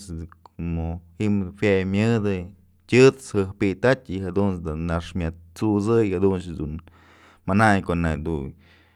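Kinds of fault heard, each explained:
Nothing stood out on listening to the speech.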